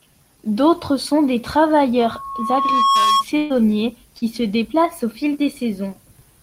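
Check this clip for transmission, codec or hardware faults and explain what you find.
Three faults are present: a feedback squeal, then two packet-loss events.

From 1.99 to 3.24 s, just after "sont des", loudspeaker feedback squeal appears. The microphone picks up its own loudspeaker, and the loop gain exceeds one at 1.1 kHz. That tone swells over about a second, reaching about 5 dB above the speech.

From 3.37 to 3.59 s comes a burst of packet loss. About 120 ms of audio never arrived. The receiver continued the last sound for roughly 123 ms, fading it. Speech then resumes further on, with the gap's content gone.

From 4.19 to 4.24 s there is short concealed packet loss. About 40 ms was lost in transit. The decoder extended the preceding sound for 30 ms, then blended back. It is heard as a brief smear in the speech.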